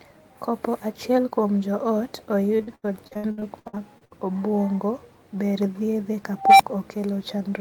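From 2.57 to 4.13 s, between "achiel kuom joot" and "obuongo ber thiedhe", repeated packet loss leaves gap after gap, each up to 83 ms, patched by extending the last sound. About 35% of the stretch is concealed, so the speech turns choppy and robotic.

At 6.36 s, after "obuongo ber thiedhe", an unstable filter's output runs away. A tone of around 700 Hz swells over 230 ms into a loud squeal, then overflows and drops to about 19 ms of silence, ending at 6.61 s.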